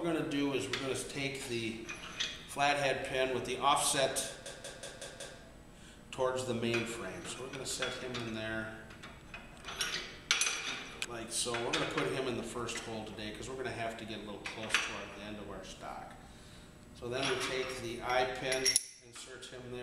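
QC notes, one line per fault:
4.46–5.39 s: system hang loop; a 186 ms slice repeats five times at 5.4 Hz, a machine-gun stutter fitting an 8192-sample ring buffer replaying during a freeze.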